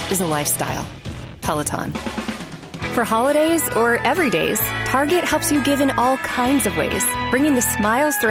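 Nothing in the audio stood out as a technical problem on listening.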